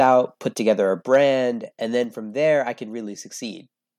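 From 0.01 to 0.06 s, just before "put together a", the speech has a harsh crackle. This is microphone overload, likely from input gain pushing peaks about 1 dB past the converter's limit, which flattens a small share of samples. The waveform shows squared-off tops, and the spectrogram shows a brief smear of broadband energy above the harmonics.

At 1.02 s, after "put together a", voice and background fall together by about 4 dB in a single step. This is microphone volume stepped down, likely by the call software reacting to the loud peak. On the waveform the envelope shrinks abruptly, and the spectrogram dims uniformly across all frequencies.

From 1.13 to 1.16 s, microphone overload returns despite the lower level, again likely from input gain driving peaks about 1 dB over the limit. A few percent of samples are clipped here. The waveform shows flat-topped peaks, and the spectrogram shows a short vertical band of distortion.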